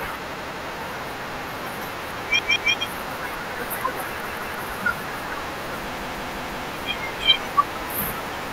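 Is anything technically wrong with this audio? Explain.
Yes. The speech stutters four times, from 0.34 to 0.68 s, 2.39 to 2.73 s, and 4.27 to 4.61 s, where a piece about 0.17 s long plays three times in a row, and from 5.97 to 6.66 s, where it plays five times. Each repeat meets the next with a hard join. This is a repeated buffer. New audio arrived late, so the device replayed its last block, a length that fits an 8192-sample buffer. No audio appears to be skipped.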